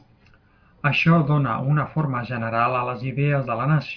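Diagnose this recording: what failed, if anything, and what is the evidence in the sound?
Nothing failed here; the speech comes through without any audible fault in the chain, so there's no stage to point at and no evidence to chase.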